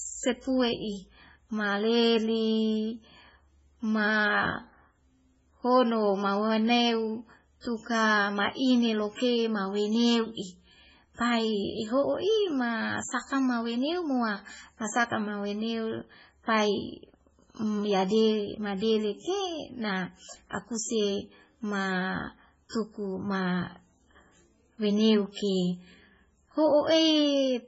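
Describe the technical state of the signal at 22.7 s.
Pre-echo runs from 22.69 to 22.73 s, just before "tuku ma". A 40 ms hiss smears ahead of the attack. The codec spread that block's quantisation noise backward. Heavy MP3 compression is likely behind it. Nothing sounds above 7.7 kHz, and the sound is watery, which fits a very low bitrate around 16 kbps.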